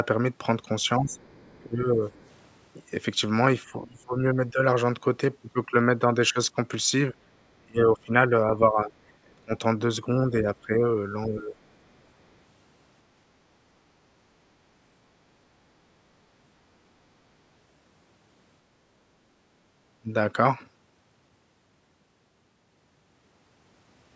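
From 0.97 to 2.03 s the speech dips by up to about 20 dB, likely speech suppressed in double talk, with the echo canceller ducking the talker while both sides overlapped. Faint scraps of the other side's voice leak through underneath, very quietly, at 1.13 to 1.57 s and 2.21 to 2.26 s, likely residual loudspeaker echo. The same suppression dips return at 3.72 to 4.59 s, over a longer stretch from 7.12 to 11.57 s reaching about 25 dB, and briefly at 20.0 to 20.13 s. Throughout, the call's microphone processing leaves nothing above 8 kHz.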